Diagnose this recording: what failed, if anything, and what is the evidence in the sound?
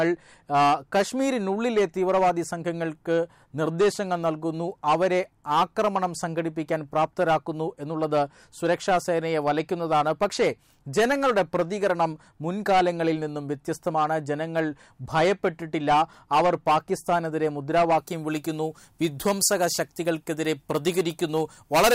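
From 17.99 s the sound turns thin and sibilant: pre-emphasis left on at playback, 10 kHz about 13 dB hot, an FM 75 µs boost never de-emphasised.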